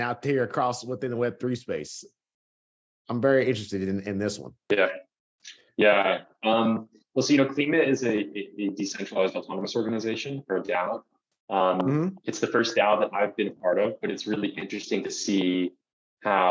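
No technical faults are audible.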